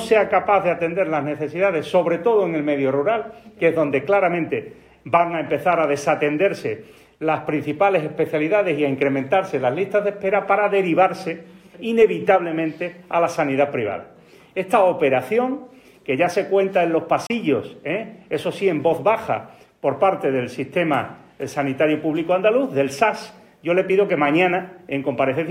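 A Bluetooth dropout occurs from 17.27 to 17.30 s: the sound cuts to silence for a few tens of milliseconds, with about 29 ms of material missing, and then resumes further along, as though it had kept playing through the gap. The likely cause is audio packets arriving too late at the wireless headphones and being discarded, and a hole of this length fits the loss of two packets.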